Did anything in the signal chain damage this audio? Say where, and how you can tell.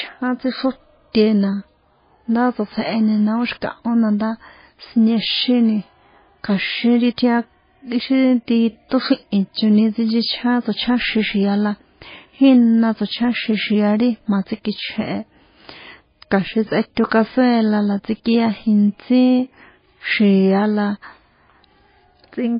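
Yes. At the codec stage the speech sounds watery and swirly throughout, with nothing above 5 kHz. This is likely heavy MP3 compression, consistent with a bitrate near 18 kbps. A spectrogram would show a hard ceiling at 5 kHz and weak components flickering between frames.

Pre-echo, also a codec fault, appears from 17.07 to 17.11 s, just before "cazuela la". The encoder spread quantisation noise across its block, so a short 48 ms hiss runs ahead of the attack. A waveform would show low-level noise before a softened onset.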